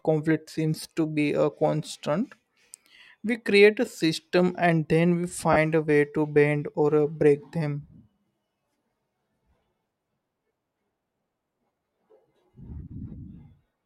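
At 3.86 s, right after "create a" and just before "system and then we", there's a brief dropout from lost LE Audio frames. About 10 ms goes missing, which fits a single lost frame. The LC3 decoder covers the gap by replaying the last spectrum with scrambled signs, so you get a tiny noisy smear where the speech should continue. A second, longer one hits from 5.53 to 5.57 s, after "system and then we" and before "a way to bend". That's roughly 30 ms, about three frames' worth, and the concealed stretch turns into a slightly longer noisy smear. The light lossy compression on the clip doesn't really come through against these.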